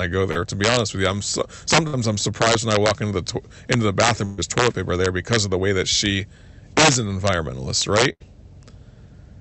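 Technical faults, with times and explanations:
Throughout, integer overflow: The loudest peaks break into violent, snapping cracks, far harsher than ordinary clipping. The speech was driven about 6 dB past the largest value the integer format can hold, and instead of being held at that ceiling, the few samples over it (well under one percent) wrapped around to the opposite extreme. Each one becomes a full-scale jump from one polarity to the other, which the ear hears as a sharp crack.
0.31–0.37 s, short concealed packet loss: A brief smear or wobble passes over the sound, lasting about 40 ms. That stretch of the call arrived too late for the decoder. The receiver covered the gap by extending the last sound it had, carrying voiced sound on at its pitch or filling with shaped noise otherwise, and then crossfaded back into the real signal, so only a short blurred patch is heard.
1.87–1.95 s, 4.25–4.42 s and 8.12–8.22 s, burst of packet loss: At each of these points the sound freezes into a held buzz or a fading hiss and then jumps ahead. 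The first comes just before "I'm surprised when I", the second between "to into the" and "toilet paper there because", and the third right after "she is an environmentalist". Runs of packets were lost, about 60 ms, 120 ms and 80 ms of audio. The receiver stretched and faded the last sound to fill each gap, so the missing audio is replaced by an artificial tail and the speech resumes further on, with the lost part never heard. Through the Opus call path, the remaining audio keeps its 8 kHz upper limit.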